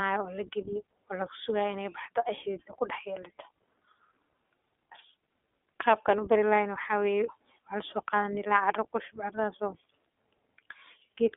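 This is a speech clip carrying iLBC codec damage from start to finish. Nothing passes above about 3.8 kHz, and the line band runs roughly 250 Hz to 3.6 kHz, so the sound is thin and narrowband. The damage is plainly audible. Speech sounds rough and slightly synthetic, because each frame's excitation is coded on its own rather than built from the previous one. The grain fits 20 ms frames and the 15.2 kbps mode.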